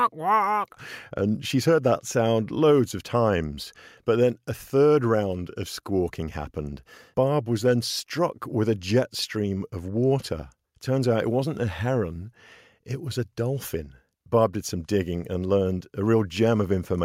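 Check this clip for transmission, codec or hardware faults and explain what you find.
Nothing in the speech points to a fault anywhere along the chain. No event stands out that would need a time or an explanation.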